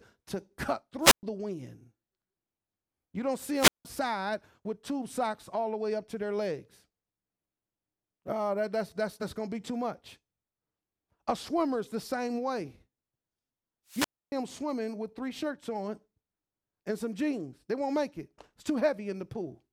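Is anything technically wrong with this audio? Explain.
Yes. The speech has three wireless microphone squelch dropouts: at 1.01–1.23 s, between "to cut" and "the wind"; at 3.52–3.85 s, after "don't see"; and at 13.88–14.33 s, before "them swimming with three". Each time, the FM radio signal fades and the receiver's squelch mutes the output for about 118 ms, 172 ms and 279 ms respectively. A brief swell of hiss precedes the hole, which tells it apart from a clean digital dropout.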